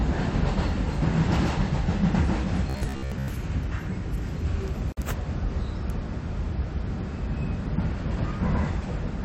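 From 2.70 to 3.28 s the sound turns rigid and metallic, locked to a buzz at 66.8 Hz. This is robotic sound from repeated short buffers, likely caused by playback repeating a 15 ms slice while most of the real audio there was skipped.

At 4.92 s a 49.6 ms gap cuts into the continuous sound, its edges smeared, before the audio resumes where it stopped. It is a gap at a join of encoded pieces: separately encoded sections were joined with their start delay and end padding left in.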